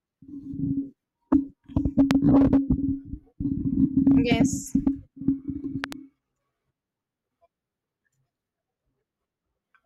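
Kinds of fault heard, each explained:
Loud pop: a sharp single pop at 2.11 s and a double pop at 5.84 s rise well above the speech, likely from electrical voltage transients.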